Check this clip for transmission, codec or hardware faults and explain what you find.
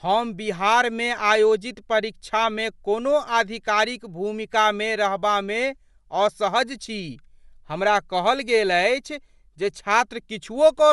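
There's one fault, and it runs the whole way through: the speech has a band-limited, grainy character that's most likely Bluetooth LC3 compression. Nothing comes through above about 11.6 kHz, and the top end carries a breathy, noisy texture rather than clean detail. That's what happens when the encoder drops upper-band content and patches it with shaped noise. The damage is plainly audible and points to a mid-rate LE Audio link, around 48 kbps with 10 ms frames.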